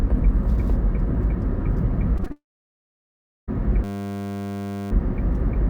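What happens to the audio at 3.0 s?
At 3.0 s the audio sits inside a long network dropout running from about 2.32 s to 3.50 s. Just after 2.32 s the last sound is carried on as a fading buzz, and for roughly 1.06 s of the span nothing is heard. The likely cause is a long break in packet delivery, with the receiver extending the final sound and then falling to silence. When audio resumes at 3.50 s, about 1.16 s of the original is missing.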